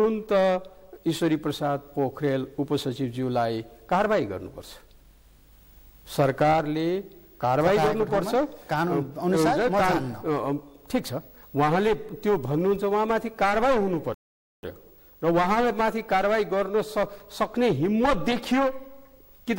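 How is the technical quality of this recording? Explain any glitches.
A single glitch stands out. A rebuffering stall at 14.14 s: the player exhausted its downloaded audio and paused until more data arrived. The sound drops to silence for about 0.49 s, then resumes exactly where it stopped, with nothing skipped but that half-second added.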